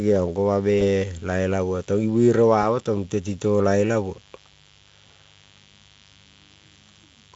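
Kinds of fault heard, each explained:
Mains buzz: A steady, raspy buzz runs under the speech for the whole clip. It comes from switching spikes on a 50 Hz supply, with harmonics climbing into the kilohertz range. It sits well below the speech but never stops.
VoIP packet loss concealed by the speech codec: Twice, at 0.79 to 0.85 s and 2.61 to 2.64 s, the speech briefly smears into a fading, buzzy tone or coloured noise. The decoder is guessing from its last state, and each gap fits a single lost 20 ms frame.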